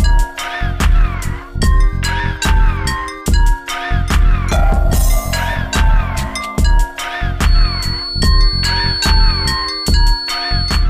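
From 7.39 s to the end at 10.9 s, a feedback whistle sits behind the sound. It is a thin, steady tone at 4.4 kHz, about 10 dB below the signal, swelling and fading slowly in level. A loudspeaker-to-microphone loop held just at the feedback point is the likely cause.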